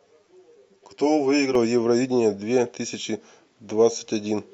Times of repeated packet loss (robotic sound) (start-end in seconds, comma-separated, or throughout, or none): none